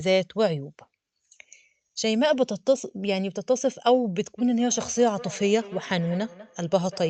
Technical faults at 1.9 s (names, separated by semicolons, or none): none